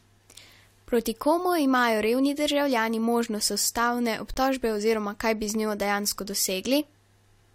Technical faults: corrupt frame muted

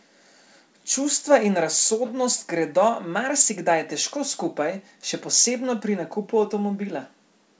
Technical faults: none

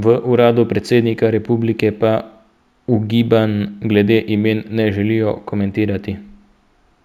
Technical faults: imaging from linear upsampling

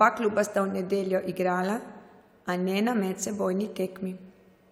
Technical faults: none

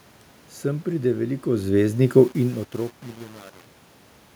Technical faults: truncation distortion on a fade

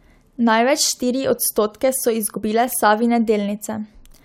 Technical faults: damaged data in a compressed stream

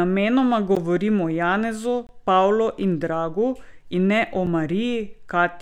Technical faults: block of digital silence

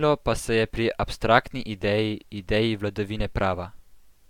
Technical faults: none

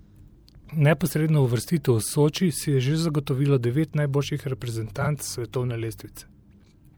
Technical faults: mains hum; frames out of order

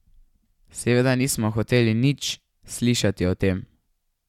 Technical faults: none

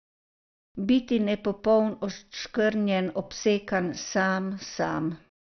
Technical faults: MP2 compression

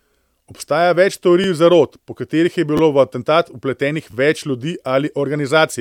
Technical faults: repeated buffer

